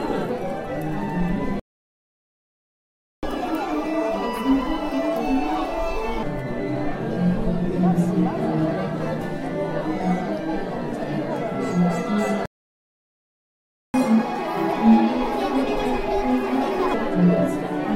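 At 1.60 s the sound cuts out mid-flow and stays silent until 3.23 s, a gap of about 1.6 s. This is a playback stall, where the player stops producing output. Its likely cause is that the player ran out of buffered data or its playback thread was blocked until it could resume.

From 3.23 s to 6.23 s the audio runs at 1.5 times normal speed, with pitch raised by roughly seven semitones, before settling back to normal. This is catch-up at higher speed. The player resamples the backlog built up during the stall so it plays faster and regains most of the lost time. Because speed and pitch are tied together here, the pitch rises along with the tempo.

A second playback stall silences the sound from 12.46 s to 13.94 s, about 1.5 s, likely from the same kind of starvation or blocking. It is followed by a milder catch-up from 13.94 s to 16.94 s at 1.25 times speed, with pitch up by around four semitones, before normal playback returns.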